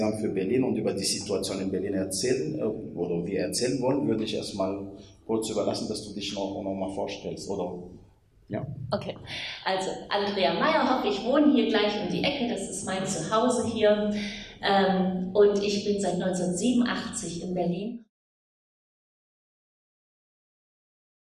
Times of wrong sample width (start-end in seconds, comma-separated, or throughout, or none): none